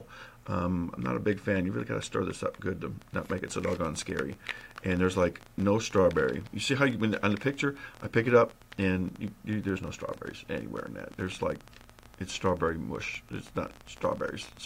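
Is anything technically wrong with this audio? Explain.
Yes. From 3.02 s to 14.58 s a train of clicks ticks over the sound, about 13.4 per second at an uneven pace, around 150 in all, each roughly as loud as the audio itself. This is likely interference from nearby equipment or a faulty connection or power supply.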